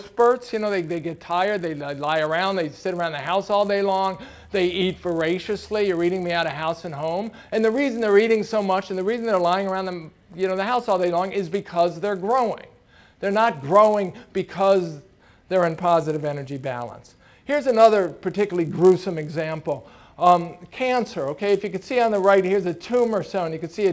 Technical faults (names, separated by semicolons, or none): resampler restarted on every block